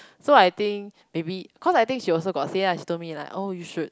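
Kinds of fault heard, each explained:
No technical fault can be heard anywhere in the speech. There is nothing here that would call for a line under any kind of fault.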